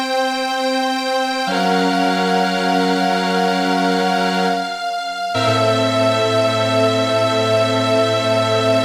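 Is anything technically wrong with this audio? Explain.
No technical faults are audible.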